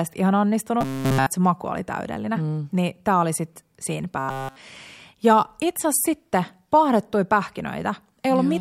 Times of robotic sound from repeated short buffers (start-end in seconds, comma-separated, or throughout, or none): 0.81-1.29, 4.19-4.56